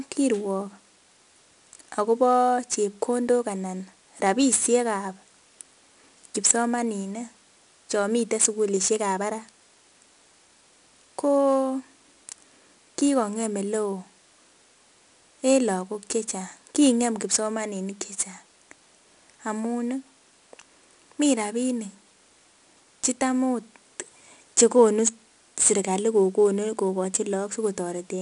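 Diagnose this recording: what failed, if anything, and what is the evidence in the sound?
The fault is at the codec stage: the speech has been through 4-bit ADPCM compression for the whole clip. Each loud syllable carries a gritty hiss that rises and falls with the level, and consonant onsets crunch where the adaptive step size lags the attack. A spectrogram shows level-tracking broadband noise filling the gaps between harmonics and a hard ceiling at 10.6 kHz. That ceiling and the data rate point to a sample rate near 22 kHz.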